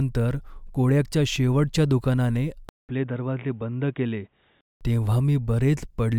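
At 2.69 s the speech cuts out for 200 ms, then returns dull and boxy, with nothing above 3.8 kHz, roughly 5 dB quieter, and with a faint new noise floor about 50 dB below the speech. This character holds until 4.81 s, when the full bandwidth returns. The likely cause is the input switched to a poorer device, such as a headset in call mode, whose narrow band, lower level and own background noise replace those of the original microphone.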